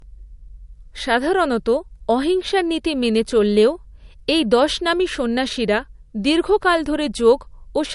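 Throughout, the likely cause is low-bitrate audio saved at a high bitrate. An early low-rate MP3 pass, probably near 48 kbit/s given the cut-off, discarded detail that the later high-rate encode cannot restore. The speech has nothing above 11.2 kHz, leaving a dull top end.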